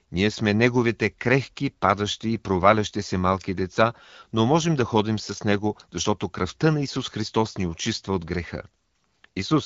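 Speech, with no technical faults to report.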